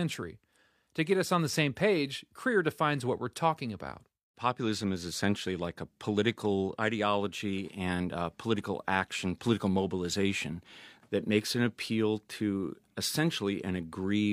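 Nothing in this speech recording stands out as a technical fault; it runs along without any glitch, dropout or hiccup worth flagging.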